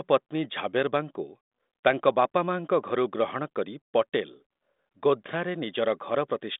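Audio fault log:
Nothing stood out on listening to this speech recording.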